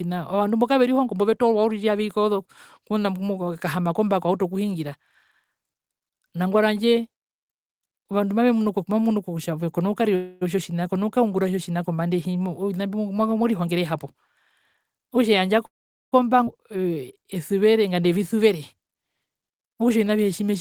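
At 10.15 to 10.43 s the speech stops moving forward for 258 ms. A short buzzy continuation of the last sound carries across the hole and then fades. This is a call audio freeze, likely caused by packets stalling in transit until the jitter buffer ran dry. When delivery resumes, the speech picks up exactly where it left off. Nothing is lost, but the whole remainder now plays 258 ms later.

Between 13.65 and 14.29 s a jitter buffer speed-up sets in. The receiver trims successive pitch-period-sized pieces to shed the excess queued audio. About a tenth of a second is removed, so the speech runs at 118% of normal rate with unchanged pitch and sounds rushed. A milder pass follows from 14.77 to 15.57 s at 109%, taking out roughly 70 ms.

A second call audio freeze runs from 15.66 to 16.14 s and lasts 464 ms. The concealment tone dies away quickly, leaving 430 ms of silence. The most plausible explanation is again a stall in packet arrival. 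Playback then resumes from the same point, with the delay pushed up by 464 ms.

From 16.46 to 16.49 s the audio skips ahead. Roughly 200 ms of speech is discarded, because later packets were already queued and the receiver jumped to them. There is no audible pause: the material on either side is spliced almost directly, with only 9 ms of fill. The net effect is to pull the delay back by about 200 ms.

At 16.71 to 17.15 s a jitter buffer slow-down rebuilds the reserve. The receiver repeats individual pitch periods and adds 52 ms in total. The speech plays at 90% of normal speed at the same pitch, so sounds are slightly stretched.

A final jitter buffer speed-up covers 17.94 to 18.95 s at 108%. It drops roughly a tenth of a second and leaves the speech faintly hurried.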